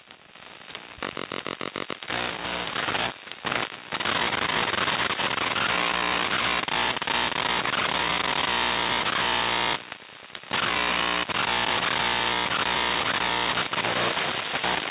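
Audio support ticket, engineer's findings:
Findings: no faults in the audio; the call path behaves as a G.711 A-law link should, with nothing above 4 kHz.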